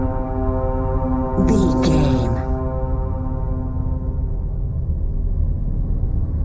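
Channel delay causes comb filtering from start to finish. One channel arrives a fraction of a millisecond behind the other, about the span of a few samples, and the two are summed to mono. Content common to both cancels at evenly spaced frequencies, with the first deep notch around 3 kHz. The sound is hollow and phasey, with a fixed dip in the upper mids. The band ends at 8 kHz, which fits the G.722 call codec, so the next notch falls outside it.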